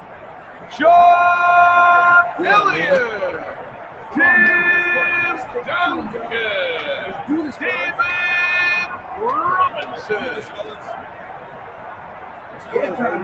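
From start to finish the noise suppressor, applied to music or sounds it was never designed for, treats held tones, ambience and reverb as background noise and turns them down while sharper onsets pass. The level swings by around 15 dB as the suppressor engages and releases, so the audio pumps and thins. A waveform shows an envelope that breathes unevenly instead of following the sound. A spectrogram shows sustained bands fading in and out while transients stay solid. The empty region above 8 kHz comes from the call path, which fits an Opus stream at about 20 kbps.

Sound cut by the noise suppressor appears in six places: 0.00 to 0.78 s, 3.45 to 4.15 s, 5.44 to 5.61 s, 8.91 to 9.18 s, 9.69 to 10.10 s, and the longest stretch, 10.38 to 12.74 s. In each, steady or decaying material drops by about 7 to 9 dB and tails are clipped short, so the sound sinks and hollows. On a waveform these are dips carved into the envelope. 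On a spectrogram, sustained energy dims across the band and decays end abruptly.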